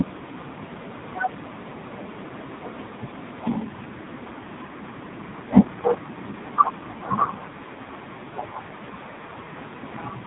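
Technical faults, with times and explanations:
throughout: AMR narrowband mobile codec. Nothing above 4 kHz comes through, so the speech sounds muffled and boxy. The coder rebuilds speech from a vocal-tract model driven by only a few pulses per 5 ms subframe. At the low rate used here, which fits roughly the 5.9 kbps mode, that model is stretched thin, so the voice is heavily damaged and sounds buzzy and synthetic. The room noise, about 36 dB below the speech, sits faintly underneath.
3.08 to 3.11 s: lost AMR speech frames. A short dip and warble interrupts the speech, which fits a single lost 20 ms frame. When a frame fails its checksum, the decoder has no new data for that stretch. It fills the gap by repeating the last good pitch and vocal-tract settings at reduced gain, which produces the brief sagging, slightly smeared sound. Speech then resumes with a moment of weakness and roughness while the decoder's state recovers.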